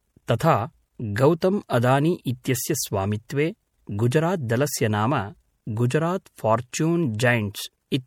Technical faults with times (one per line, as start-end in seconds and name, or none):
0.00-8.06 low-bitrate audio saved at a high bitrate